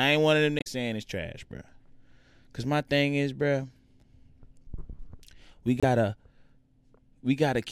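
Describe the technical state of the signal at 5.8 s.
At 5.8 s the speech breaks into a short glitch lasting to 5.84 s, caused by damaged data in a compressed stream. Corrupted bytes there make the decoder misread its frames and lose sync until it locates the next valid frame header.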